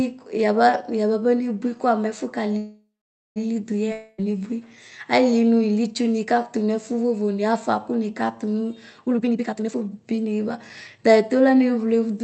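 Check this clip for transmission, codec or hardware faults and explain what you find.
Three transmission faults turn up in this speech, all of them in the jitter-buffer and network side of a call path whose audio is band-limited at 8 kHz, consistent with Opus at around 40 kbps.

Call audio freeze, 2.57 to 3.38 s: packets were likely held up, so the jitter buffer emptied and the receiver stretched the last sound into a fading buzz, then 0.49 s of silence. Nothing is lost; 0.79 s of delay is inserted. On a spectrogram, smeared harmonics fade into a blank band.

Long network dropout, 3.92 to 4.21 s: packets likely never arrived, and about 0.26 s of speech is gone. Concealment fills the gap with a decaying hiss without reaching silence, then speech resumes further on. The waveform shows a tapering envelope and an abrupt jump in content.

Jitter buffer speed-up, 9.06 to 10.77 s: with excess audio queued, the receiver repeatedly cut out short pieces of one or a few pitch periods, removing roughly 0.7 s. 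Speech runs at 146 % speed with unchanged pitch and sounds hurried. The spectrogram shows compressed syllables while harmonic spacing stays fixed.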